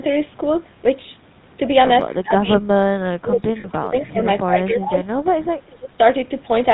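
Throughout, the speech carries the roughness of the GSM full-rate codec at 13 kbps. The vocal tract is modelled and driven by sparse, regularly spaced pulses, so voiced sounds take on a gravelly buzz and nothing survives above 4 kHz. That ceiling comes from the codec, not from the call's microphone processing, whose own filtering only takes out the lowest bass. Unlike packet-loss damage, this coloration never lets up.

At 2.1 to 2.16 s and again at 4.05 to 4.11 s, a faint scrap of voice arrives about 0.24 s behind the speech it copies, roughly 30 dB down. This is an echo leak, likely from a loudspeaker whose echo canceller let residue through. The fixed delay is what separates it from reverberation or a pre-echo: it is a distinct repeat, not a smear.

Four times the talker's level sinks sharply while the other side is active: 2.17 to 2.65 s, 3.08 to 4.19 s, 4.46 to 4.99 s and 5.53 to 5.97 s. 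The dips reach around 20 to 25 dB and lose brightness or break into pieces. This is speech suppressed in double talk, likely with the canceller ducking both voices when it could not tell them apart. The level returns when the overlap ends, unlike a dropout, which is just a gap.

Inside the second suppressed stretch, from 3.6 to 3.66 s, the sound freezes into a short metallic ring for 40 ms, which fits two lost 20 ms frames. These are lost GSM frames, concealed by repeating the last good frame's settings. The ringing hold, rather than a silent hole or a level dip, marks it as concealment.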